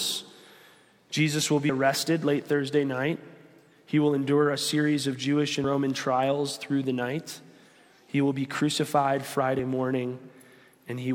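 Audio missing between chunks at 1.69, 5.64 and 9.59 s: roughly 50 ms skips each time, likely lost as one 4-second chunk hands over to the next.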